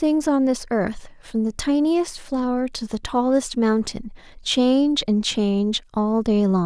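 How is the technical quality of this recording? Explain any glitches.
No glitches can be heard anywhere in the speech.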